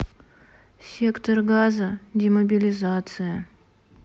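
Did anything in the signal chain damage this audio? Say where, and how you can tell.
No, none of the stages in the chain left any audible damage on this speech recording.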